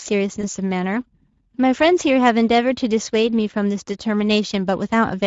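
A speech recording with a grainy, hoarse roughness throughout, and consonants and breathy sounds with a thin, noisy texture instead of clean detail. This is plainly audible Speex codec damage. Speex is a CELP coder built for older VoIP and game chat, and it models the voice as a filter driven by a coded excitation. The character here fits a middle setting around 16.8 kbps, where that excitation is coded coarsely enough to leave a noisy edge on the voice. Between 0.41 and 0.48 s the sound briefly smears into a stretched, fading tail and stays weak or distorted for a moment afterwards. This is VoIP packet loss concealed by the speech codec. The pattern points to roughly one 20 ms frame going missing. The decoder filled the gap by extending its last pitch and filter settings at falling gain, and because each following frame builds on that guessed state, the voice needs a few tens of milliseconds to recover.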